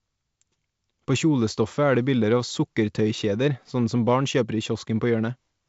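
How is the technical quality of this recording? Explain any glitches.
No glitches to report: the speech comes through a G.722 wideband telephone path at 56 kbit/s, with nothing above about 7.7 kHz and only the light upper-band hiss and faint low-band graininess that this coding brings at that rate.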